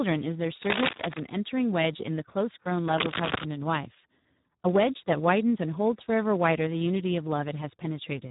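The whole clip carries heavy Speex codec damage. The speech sounds hoarse and noisy. Too few bits reach the excitation, which fits a low setting near 8 kbps. Nothing is left above 3.8 kHz.

From 0.59 to 1.2 s, dense rustling bursts sit a little above the speech level. From 2.87 to 3.45 s they return, about as loud as the speech. This cable scratch noise is likely a worn contact being moved.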